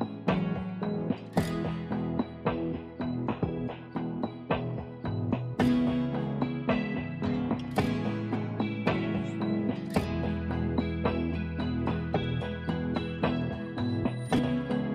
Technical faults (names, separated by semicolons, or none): damaged data in a compressed stream